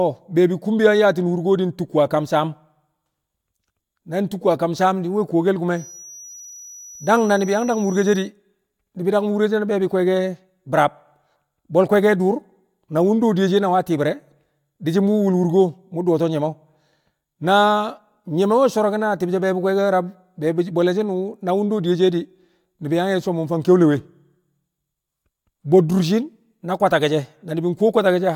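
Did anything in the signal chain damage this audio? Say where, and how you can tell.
Yes. After "saam di̱ nwe̱ kuwkel", 5.67 to 8.32 s, a feedback whistle at 5.9 kHz sits about 20 dB under the speech. It swells and fades slowly in level but never builds into a howl, likely a loudspeaker-to-microphone loop held at the edge of feedback.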